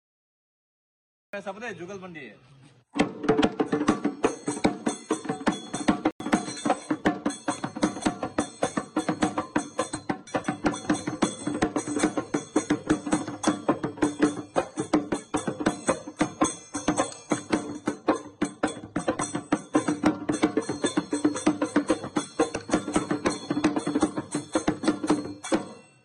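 The audio opens with a cut-off start: digital silence runs to 1.33 s, where the sound enters abruptly mid-event with no attack or fade. Unlike a fade-in or a slow device start, nothing builds up. The material simply appears already in progress.

From 6.11 s to 6.20 s, a corrupt frame muted leaves a hole of about 93 ms, which fits two codec frames that the decoder rejected and replaced with silence. The gap starts abruptly, but timing is preserved, unlike a buffer dropout that stalls or shifts the playback.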